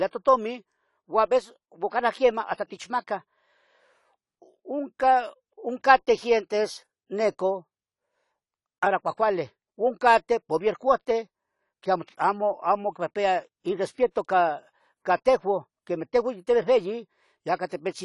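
Throughout the speech, AAC compression is the likely cause of plainly audible damage: the sound is dull and smeared, as coarse quantisation of each frame's frequency content fits a low bitrate around 32 kbps. A spectrogram shows a flat ceiling, with nothing above 11.4 kHz.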